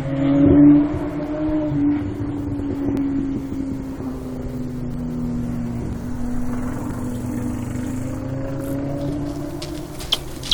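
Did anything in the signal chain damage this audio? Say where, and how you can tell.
Yes. Where stream segments are joined, a fault overlaps one segment with the next. Tiny clicks or skips fall at 1.01, 1.99, 2.97, 4.94, 5.93, 6.91 and 7.90 s, spaced roughly every second to match the 1.0 s segment length. At each joint the player trims between 5 and 13 ms it wrongly takes as duplicated, so the waveform jumps. Unlike a network dropout, nothing is replaced by silence or concealment, and the rhythm is regular rather than random.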